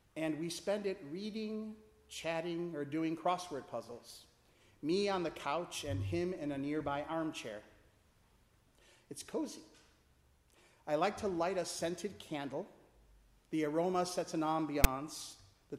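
Right near the end, at 14.84 s, there's a very short blast of file tags played as audio. A chunk of text tags got handed to the decoder as if it were sample data, so those character bytes come out as a loud, buzzy rasp that sits off to one side of centre. It's gone in a few milliseconds, but the edges are hard, so it lands as a sharp little crack of static rather than anything that blends into the sound around it.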